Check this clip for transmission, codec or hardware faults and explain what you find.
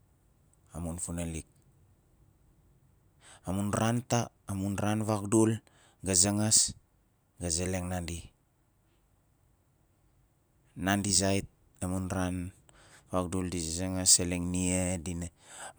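Nothing in the signal chain stands out as a transmission, codec or hardware problem.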